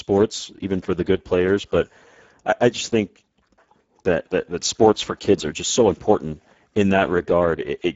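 A speech recording carrying plainly audible Speex codec damage from start to finish, consistent with a low bitrate near 10 kbps. This CELP coder has limited bits for the excitation signal, which degrades the speech texture, and the spectrum stops at about 7.7 kHz.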